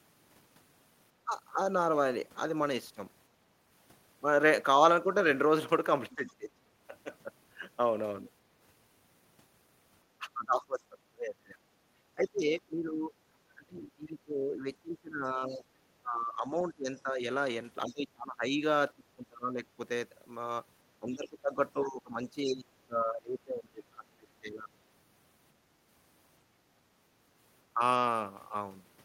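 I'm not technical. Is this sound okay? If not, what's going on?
No. Two problems show up, both typical of calls where both people talk at once.

The first is speech suppressed in double talk. The talker's speech suddenly gets quieter or drops out in pieces. It is brief at 1.25 to 1.33 seconds and 27.74 to 27.8 seconds, and lasts longer from 6.15 to 6.7 seconds. The worst stretches are 10.19 to 19.79 seconds, where about seven seconds are affected, and 21.0 to 24.7 seconds. The likely cause is the echo canceller turning everything down because it couldn't separate the talker from the other side's voice.

The second is the other side's voice leaking through. A faint second voice can be heard under the talker at 6.11 to 6.3 seconds, 15.49 to 15.55 seconds, and 16.95 to 17.93 seconds. It is much quieter than the main speech. This is likely the far end playing on a loudspeaker and not being fully removed from the microphone.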